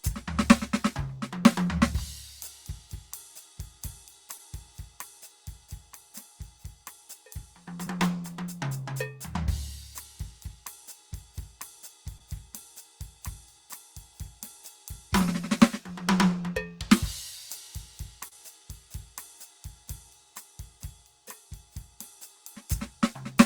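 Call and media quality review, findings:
Short concealed packet loss, 4.37–4.41 s, 7.85–7.88 s, 12.18–12.22 s, 18.28–18.35 s. Brief smears in the music where 20 ms of audio, 40 ms at 18.28 s, missed the decoder. Receiver-side concealment extrapolated the preceding sound across each gap and crossfaded back. The longest event, at 18.28 s, also adds roughly 15 ms of stretch. Probable component: network path and jitter buffer.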